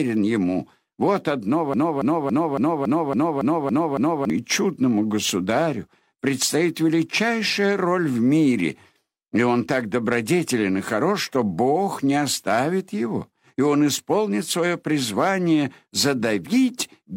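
From 1.74 s to 4.30 s a broken-record loop repeats one 0.28 s fragment nine times, likely from a stalled stream resending its last buffer. Waveform and spectrogram show identical blocks tiled edge to edge, and the speech due in that span is lost.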